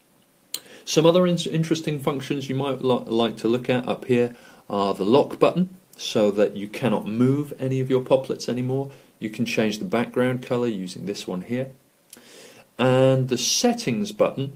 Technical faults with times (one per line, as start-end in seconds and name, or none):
0.00-14.55 clock drift between sender and receiver
0.19-14.48 repeated timing corrections